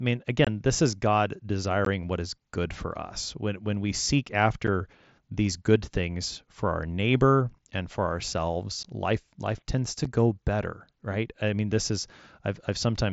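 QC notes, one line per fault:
0.45–0.47, 1.85, 4.67, 8.83 and 10.05 s: unconcealed Bluetooth headset packet loss. Short holes of 22.5, 15, 7.5, 15 and 7.5 ms fall at these points: at 1.85 s just before "what is good for", at 4.67 s right after "when we seek", and at 8.83 s between "neighbor and for ourselves" and "life life tends to". Each hole drops out with abrupt edges. The lengths fit whole 7.5 ms frames going missing on the wideband mSBC link with nothing filled in.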